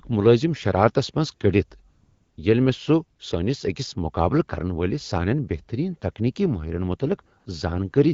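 AMR comfort noise appears from 1.89 to 2.37 s, right after "ملٲزم شرارتس منز کٔڑتھ", and again briefly from 7.39 to 7.45 s, after "سانین بہترین تکنیکی ماہرن". In both pauses the phone treated the talker as silent and stopped sending speech frames, for about 480 ms and then 60 ms. The receiver filled each gap with smooth synthetic noise built from a rough level and spectrum estimate, so the real background drops out and a steady hiss switches in and out.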